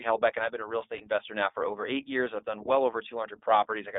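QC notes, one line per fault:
Throughout: iLBC codec. Audio is confined to about 250 Hz–3.6 kHz, with plainly audible rough, synthetic coding damage, which fits iLBC's 15.2 kbps mode with 20 ms frames.
0.98–1.02 s: lost iLBC frames. Between "been a real estate" and "investor now for over", a brief buzzy held vowel replaces the missing audio, which fits a single lost 20 ms frame. The decoder repeated the last pitch cycle with noise, and the sound recovers almost at once.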